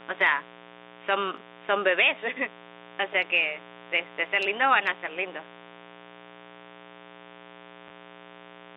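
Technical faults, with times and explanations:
Throughout: mains buzz. A steady, raspy buzz sits under the speech at roughly 15 dB below it. Its fundamental is 60 Hz, so it comes from a 60 Hz supply. The rasp comes from sharp switching spikes, such as from a dimmer, rectifier or unshielded run, entering twice per mains cycle. Those spikes build a dense series of harmonics that reach well into the telephone band rather than staying a low hum.
7.88–7.90 s: packet loss with last packet repeated. A 20 ms stretch of audio went missing, and the receiver filled it by replaying the previous packet. That points to a single lost 20 ms packet. The single replayed segment is heard as a small blip.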